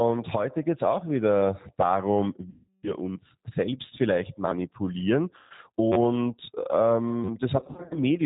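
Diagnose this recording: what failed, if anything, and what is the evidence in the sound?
The codec stage shows plainly audible damage from the G.729 codec throughout. The sound fits G.729A at 8 kbit/s. Nothing above 4 kHz survives, so the speech sounds band-limited and dull. The texture is rough and slightly synthetic. That comes from the coder rebuilding each 10 ms frame from a vocal tract filter, a pitch predictor and a few fixed pulses, rather than sending the waveform itself.

The network stage lost packets, and the decoder covered the gaps with VoIP packet loss concealment. The first gap runs from 2.50 to 2.94 s, about 330 ms of missing audio. The second runs from 5.36 to 5.53 s, about 140 ms. From 7.57 to 7.98 s, about 210 ms is lost in scattered bursts, the longest 50 ms. In each gap the decoder extends its last pitch and filter into a buzzy tone or coloured noise that fades. The speech stays weakened just after each one.

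The driver or buffer stage failed as a repeated buffer at 4.48 to 4.51 s, right after "selbst vielleicht". A tiny slice plays three extra times with hard joins. Each repeat lasts about 10.7 ms, which fits a 512-sample buffer. The device replayed its last block because fresh audio arrived late. About 30 ms of real audio never played.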